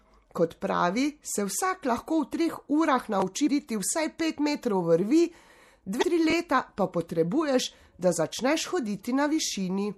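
Throughout the speech, the audio sounds watery and swirly, with smeared attacks. That is likely MP3 compression at a low bitrate, which fits 64 kbps.

From 3.20 to 3.22 s, after "treh urah", there is a repeated buffer. A 20 ms piece plays one extra time because new audio arrived late. It is heard as a brief stutter or click.

At 3.47 s, just before "vsaj pet metrov vrvi", damaged data in a compressed stream gives a short blip. The decoder misreads bad frames and jumps to the next one. The same fault recurs from 5.99 to 6.03 s.

From 6.30 to 6.32 s, just before "pa potrebuješ da", another 20 ms repeated buffer plays twice. A hard join makes a quick stutter.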